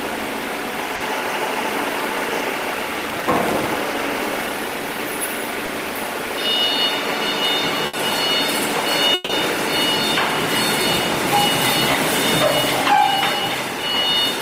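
At 0.95 s a burst of packet loss drops about 50 ms. The receiver extends and fades the last sound before jumping ahead, which shows as a smeared, decaying band on a spectrogram.

From 3.02 to 3.77 s, processor overload crackle: dozens of missed deadlines on buffers of a few milliseconds replay stale audio, drawing dense hard-edged vertical streaks and waveform discontinuities.

At 5.65 s a short concealed packet loss fills about 20 ms with extrapolated sound, a brief smear or wobble seen as a small blurred patch.

Further bursts of packet loss follow at 7.86 s (about 70 ms) and 9.14 to 9.30 s (about 150 ms), each a held, fading tail with the following audio missing.

Another short concealed packet loss of about 20 ms occurs at 11.92 s.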